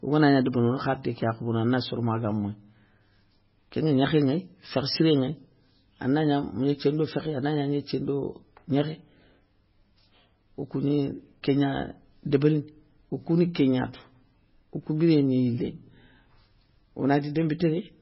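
From start to finish the speech sounds watery and swirly, with metallic chirping around the s sounds and consonant attacks that smear rather than snap. Nothing is heard above 5.6 kHz, so the top end is dull. The likely cause is heavy MP3 compression at a very low bitrate, which fits roughly 16 kbps. Starved of bits, the encoder cuts the treble at a fixed point and drops weak frequency lines that flicker on and off between frames.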